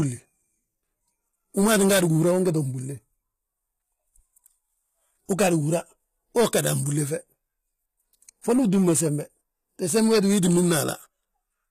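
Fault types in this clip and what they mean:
HE-AAC compression: The speech has plainly audible codec damage throughout, with nothing above about 14.9 kHz, and the upper band sounds bright but synthetic. That fits a low bitrate, around 20 kbps, and the likely cause is spectral band replication rebuilding the treble from copied lower bands. Unlike a plain low-pass cut or ordinary MP3 smearing, the top keeps its sheen, but its harmonics don't align, so s sounds turn gritty and lispy.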